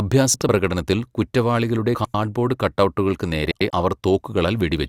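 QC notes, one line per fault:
0.34–0.49 s, 1.95–2.14 s, 3.51–3.70 s: frames out of order. In each span, two adjacent blocks of speech play in swapped order: about 72 ms each in the first span and 96 ms each in the other two, which fits runs of three and four frames. The exchange sounds like a brief garbled flutter. No time is lost.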